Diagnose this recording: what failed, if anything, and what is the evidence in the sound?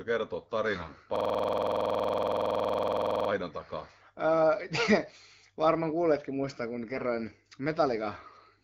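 The radio link corrupted the AMR-WB stream with AMR bit errors. From 0.74 to 0.98 s, roughly a few percent of bits in the weakly protected classes arrived flipped. That span fits about a dozen 20 ms frames. Their checksums still passed, so the decoder used them. Misplaced excitation pulses and wrong fine gain, pitch and spectral values make the speech hoarse, scratchy and gargly there, while pitch and level stay roughly intact.

At the driver or buffer stage, a system hang loop sets in from 1.16 to 3.30 s. The host stalled while the audio hardware kept replaying the same ring buffer: one 46.44 ms slice, which fits a 2048-sample buffer, repeats exactly 46 times. At 21.5 Hz the repeats come out as a rapid, machine-gun stutter. Essentially no audio is lost, as playback resumes where it stopped, with the light coloration of the 12.65 kbit/s codec.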